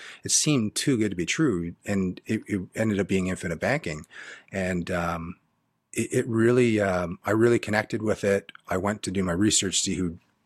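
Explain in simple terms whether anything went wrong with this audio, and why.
Nothing went wrong with this audio; the speech comes across as recorded, with no dropouts, glitches or other faults to explain.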